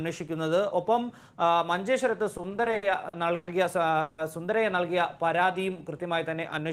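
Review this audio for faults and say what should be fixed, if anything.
From 2.37 to 3.49 s the audio shows repeated stalls (stutter): ten short interruptions, the longest 120 ms, about 300 ms of filled time, roughly 27% of that span. Packets reached the receiver more slowly than they were played, so the jitter buffer kept emptying and the last sound was stretched to bridge each wait. Nothing is lost, but the audio drags and hiccups. A spectrogram shows smeared, flat-lined horizontal bands repeating the preceding frame, and the waveform shows short stretches of repeated, fading cycles. A larger or faster-adapting jitter buffer and steadier packet delivery would prevent this.

At 4.01 to 4.20 s there is a call audio freeze lasting 170 ms. The sound hangs on its last moment as a continued sound for the whole gap, never falling to silence, and then resumes exactly where it stopped, shifting everything after it 170 ms later. 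The cause is likely packets held up in transit, draining the jitter buffer. On a spectrogram the gap appears as a frozen, featureless band. In the waveform it appears as a uniform, repeating pattern bridging the break. Reducing network delay spikes, for example with traffic prioritisation, would prevent it.

From 5.25 to 6.01 s a jitter buffer slow-down stretches the audio by 100 ms, so it plays at about 88% speed without any change in pitch. The receiver rebuilt its reserve by repeating single pitch periods and fragments of pauses several times in a row, which draws sounds out. A spectrogram shows harmonics at unchanged frequencies but elongated in time, and the waveform shows near-identical cycles repeated back to back. Keeping the buffer from running low with a steadier target delay would avoid it.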